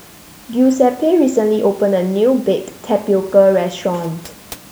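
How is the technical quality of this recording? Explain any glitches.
Nothing stood out as a glitch on listening; the only thing beneath the speech is the room's own background noise, about 26 dB lower.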